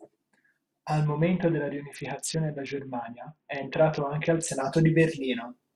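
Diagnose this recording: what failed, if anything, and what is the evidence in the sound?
Codec stage: a Bluetooth SBC bit pool drop from 1.05 to 4.48 s dulls the treble and adds grit, fitting roughly 60 kbps. Unlike packet loss, there are no gaps.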